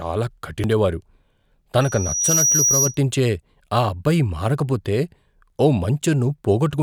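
Damaged data in a compressed stream breaks the speech at 0.64 s and again at 6.02 s. Corrupted bytes leave the decoder unable to read those frames, so it loses sync and hunts for the next header, producing a short chirp or blip each time. A loudspeaker feedback squeal runs from 1.81 to 3.00 s. The microphone is picking up the loudspeaker it feeds, and a 5.8 kHz tone swells over roughly half a second into a piercing whistle that sits a few decibels above the speech.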